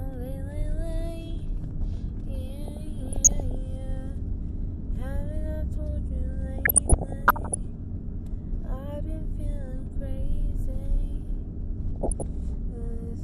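Throughout, the sound is dull, with a gurgling, granular edge and upper bands flickering in and out. This is MP2 compression, likely from MPEG Layer II coding at a low rate near 80 kbps. Too few bits left high sub-bands switched off and the rest coarsely quantised. Unlike the error bursts, it never lets up.

From 2.66 to 3.55 s, 6.58 to 7.57 s and 11.96 to 12.22 s, DAB burbling breaks in as short blips of noise. Bit errors, a fraction of a percent, slipped past error correction and corrupted samples in single sub-bands.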